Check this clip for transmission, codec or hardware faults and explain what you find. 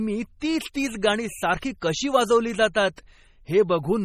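Yes, there are two codec problems. The whole clip sounds heavily compressed and has a watery, swirly quality. There's also a short hiss just before several sharp attacks.

The compression damage runs throughout. Nothing gets through above about 14.5 kHz, and the upper detail flickers in and out. That's likely MP3 compression at a starved bitrate, something like 32 kbps. The encoder cuts the treble and drops weak frequency lines from frame to frame, which leaves s sounds metallic and attacks smeared.

Pre-echo shows up at 0.40 s, from 0.73 to 0.75 s just before "तीच गाणी", at 1.61 s between "तीच तीच गाणी" and "कशी वाजवली", and at 2.96 s after "कशी वाजवली". Each is a brief hiss of roughly 17 to 22 ms. The codec spreads noise sized for the loud attack across its whole block, so that noise spills into the quiet moment before the attack.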